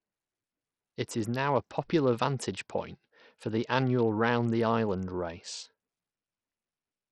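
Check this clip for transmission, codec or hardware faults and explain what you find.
The speech is damaged by codec compression throughout, most likely Bluetooth SBC compression. The treble thins out and flickers in and out, and a gritty, grainy noise with aliasing clings to the sound from start to finish. SBC splits the signal into a few wide sub-bands and hands out bits with no real hearing model. At a low bit pool the upper bands get few or none, and the rest are coarsely quantised. The heavy damage fits a rate around 64 kbps.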